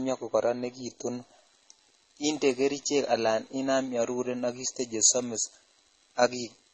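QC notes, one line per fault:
Throughout: transcoding between lossy codecs. The speech has nothing above 8.3 kHz. Two layers of coding artefacts are heard together. The sound points to a likely chain of MP3 then AAC-LC, both near 32 kbit/s. The second codec re-encodes the first one's damage.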